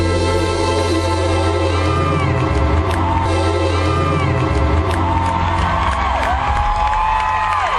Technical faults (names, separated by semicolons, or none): stream segment repeated